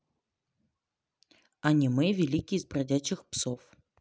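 No technical faults are audible.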